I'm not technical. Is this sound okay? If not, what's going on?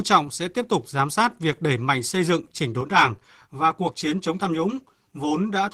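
No. Throughout the clip, the speech was squeezed hard by Opus voice compression. To save space, the encoder throws away fine detail and rebuilds the voice from a rough sketch every fiftieth of a second. Some detail survives in the higher sounds, but the damage is plainly audible from start to finish: the voice comes out rough and hoarse, with a slightly robotic, synthetic edge.

A second fault starts at 2.81 s, just after "mạnh xây dựng chỉnh", and lasts to the end. This is channel delay, which produces comb filtering. One of the two channels arrives about a hundredth of a second late, and when the two are merged into one, parts of the sound cancel out at regularly spaced pitches. The voice turns hollow and phasey, as if heard down a tube.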